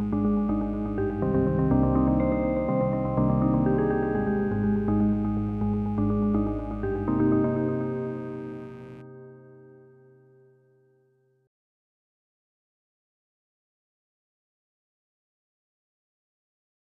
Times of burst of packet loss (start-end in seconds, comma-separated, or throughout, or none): none